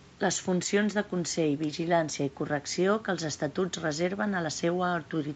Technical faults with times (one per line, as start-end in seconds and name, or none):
none